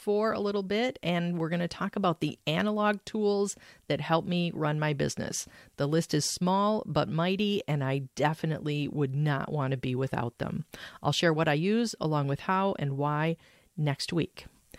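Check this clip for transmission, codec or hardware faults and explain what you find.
Nothing in the speech points to any transmission, codec or hardware fault.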